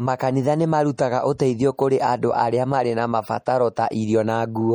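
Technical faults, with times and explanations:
Throughout: MP3 compression. The speech has a plainly audible watery, swirling quality, as weak frequency lines switch on and off between frames. The damage likely comes from MP3 encoding at a low bitrate, about 48 kbps. Nothing is present above 21 kHz.
0.97, 1.38, 1.77 and 3.46 s (the last just after "arĩa marĩ na"): pre-echo. A hiss runs 12 to 16 ms ahead of each sharp attack. The codec spreads its noise across the whole block, so noise sized for the loud onset fills the quiet moment before it. The attack sounds smeared.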